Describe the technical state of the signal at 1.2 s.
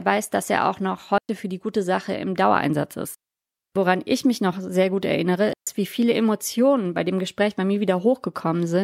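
A digital wireless dropout runs from 1.18 to 1.29 s, just after "dass er auch noch" and before "für die gute". The radio link lost more data than the receiver could repair, so instead of passing corrupted audio it muted the output for about 110 ms, ramping down and back up very quickly. What you hear is a clean gap of near silence cut into the speech, with no click, hiss or noise burst on either side.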